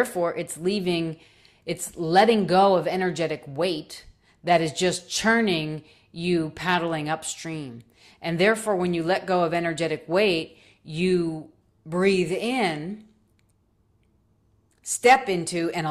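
Nothing goes wrong anywhere in this stretch of speech, so there's no fault to place on the timeline or explain.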